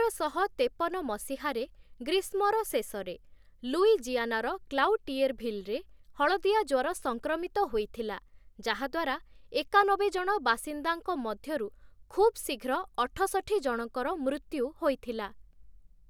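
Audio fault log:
Nothing wrong turns up anywhere in this bit of speech, so there's nothing to log here.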